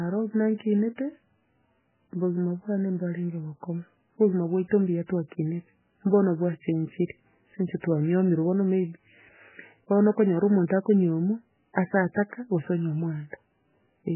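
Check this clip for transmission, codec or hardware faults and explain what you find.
Heavy codec damage runs through the entire speech clip, likely MP3 compression at a very low bitrate, around 8 kbps. Nothing survives above 3 kHz, so the spectrogram shows a flat ceiling there. Starved of bits, the encoder zeroes weak bands that flicker frame to frame, sounding watery and swirly, with smeared onsets.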